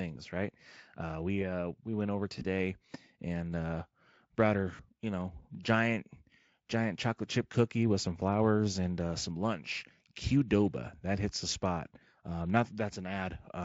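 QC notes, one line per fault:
2.39–2.45 s and 4.75–4.83 s, VoIP packet loss concealed by the speech codec: after "uh we went over", then after "and uh brought her" before "you know", the sound smears into a short buzzy tone or coloured noise that fades. The decoder is filling gaps of about 20 ms and 40 ms from its last pitch and filter, and the voice stays weak or distorted briefly after.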